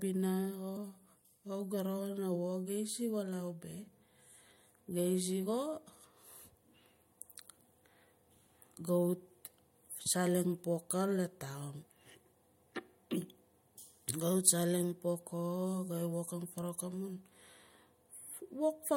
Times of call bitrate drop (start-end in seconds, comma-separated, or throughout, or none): none